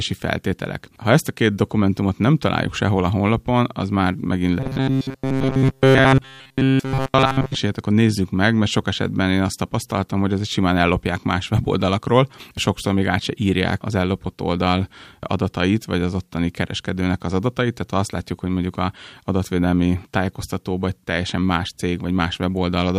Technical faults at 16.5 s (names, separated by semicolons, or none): none